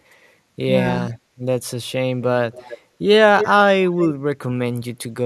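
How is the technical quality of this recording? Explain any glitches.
The recording has two kinds of glitch, both from a call path.

Echo leak at 2.52–2.78 s, 3.38–3.48 s and 3.85–4.08 s: a copy of the speech returns 274 ms late, likely from a loudspeaker echo the far-end canceller missed. It sits about 20 dB to 5 dB below the speech, loudest at 3.38 s. On a spectrogram it shows as a weaker, shifted duplicate of the harmonics.

Speech suppressed in double talk at 4.12–4.2 s: the speech briefly drops out, by about 40 dB at its deepest, for a few tens of milliseconds. The likely cause is the echo canceller turning down both its own talker and the loudspeaker echo during overlap. The waveform shows a short near-silent notch.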